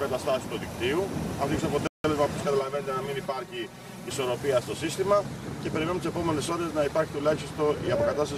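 At 1.87 s the sound cuts out mid-flow and stays silent for about 170 ms, resuming at 2.04 s. This is a playback stall. The abrupt gap suggests the player's output was briefly starved. The likely cause is the buffer running dry or the playback thread being blocked, with the output falling silent until data flowed again.

From 2.43 s to 4.11 s the audio turns hollow and phasey, with a coloration that stays fixed while it lasts. This is channel delay with comb filtering. One channel runs around 5 ms behind the other, and when the two are summed to mono, the shared content cancels at regular intervals. The first notch falls near 100 Hz, and further notches repeat at evenly spaced frequencies above it.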